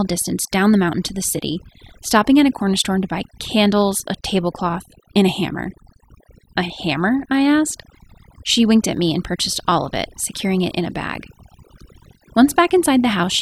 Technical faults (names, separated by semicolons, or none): overdone noise removal